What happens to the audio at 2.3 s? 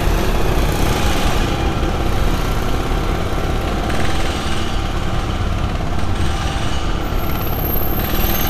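Repeated frames at 2.22 to 2.26 s: a short block of compressed audio, about 42.7 ms and consistent with two frames, was delivered twice, so the decoder plays that slice once more. The sound stutters briefly, and the clip runs 42.7 ms longer.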